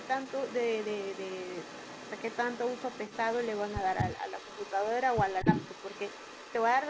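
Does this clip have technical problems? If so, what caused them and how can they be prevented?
Yes. An echo leak runs through the whole clip, from 0.0 to 6.89 s: a faint delayed copy of the speech trails it by about 0.24 s, sitting roughly 15 dB below the direct sound. The likely cause is a far end playing the call on a loudspeaker whose echo canceller let part of the microphone pickup through. On a spectrogram, each syllable's harmonics reappear as a weaker ghost shifted right by that delay. Prevention: use a headset at the far end or tune its acoustic echo canceller so residual echo is fully suppressed.

Speech suppressed in double talk shows as a brief dip at 5.42 to 5.47 s, about 50 ms long, where the level falls by around 10 dB. This is likely the echo canceller failing to separate the local talker from the loudspeaker echo while both sides were active, so it turned everything down. 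In the waveform the envelope pinches in briefly; on a spectrogram a thin vertical band fades. Prevention: use an echo canceller with stronger double-talk detection or reduce loudspeaker coupling.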